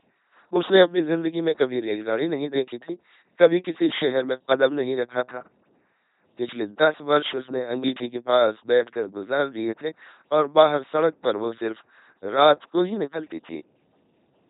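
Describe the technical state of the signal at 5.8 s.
At 5.8 s the signal carries LPC-10 vocoder damage, present across the entire clip rather than starting or stopping here. The speech has been reduced to a short-order resonance filter excited by either a periodic pulse or noise, switching hard between the two with no blend. The result is a heavily degraded, buzzy, robotic timbre, with nothing above 3.8 kHz, and a coarseness that fits a 2.4 kbit/s rate.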